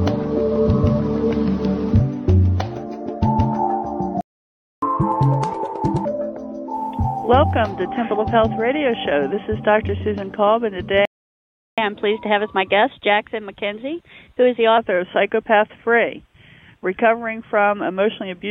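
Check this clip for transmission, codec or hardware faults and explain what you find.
Two playback stalls turn up, each followed by a catch-up at higher speed.

Playback stall: the sound cuts to silence at 4.21 s for 0.61 s and again at 11.05 s for 0.72 s, then resumes. The player was likely starved of data or had its thread blocked, so output simply stopped until it recovered.

Catch-up at higher speed: right after each gap the player rushes through its backlog by resampling. From 4.82 to 6.05 s it runs at 1.5x, pitched up around seven semitones. From 11.78 to 14.78 s it's gentler, 1.1x and about a semitone and a half up, before settling back to normal.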